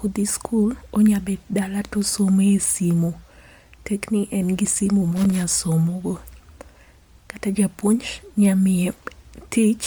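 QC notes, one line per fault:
Throughout: Bluetooth LC3 compression. The codec damage is plainly audible across the whole speech clip, with a grainy, breathy edge on the upper range where the encoder has thrown away detail and papered over it with filled-in noise. Content stops around 20.2 kHz. The texture fits the LC3 codec with 10 ms frames at something like 48 kbps, so a Bluetooth LE Audio link is the likely source.
5.16 to 5.43 s: loose connector crackle. Right after "ni en gi simu" there's a short, irregular burst of scratchy crackle lasting roughly a quarter of a second, clearing just before "somo go". That's a contact in the chain making and breaking as something shifted, chopping the signal on and off in quick ragged bursts. Worth checking cables and jacks on that rig.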